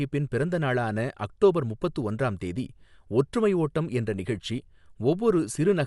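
From start to end, the speech sounds dull, with nothing above 11.5 kHz. Rough, fluttering noise clings to tonal parts. The likely cause is Dolby Digital compression at a low bitrate, which fits a 64 kbps encode. Many frequency lines get no mantissa bits and are filled with noise.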